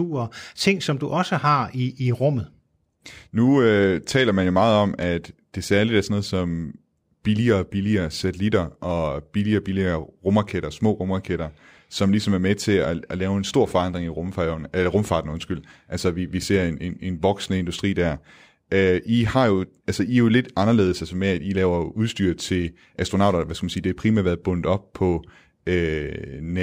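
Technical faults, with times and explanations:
Throughout, imaging from linear upsampling: sibilants carry a faint metallic shimmer and the top end sounds dulled. Straight-line interpolation filters weakly, leaving a mirrored spectrum copy at 12 to 24 kHz, roughly 40 dB down, which fits raising 24 kHz to 44.1 kHz.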